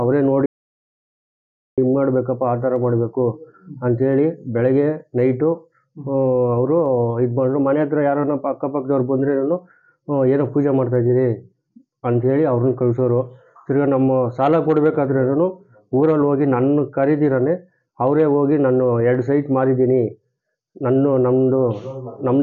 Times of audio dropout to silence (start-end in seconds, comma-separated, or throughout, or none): 0.46-1.78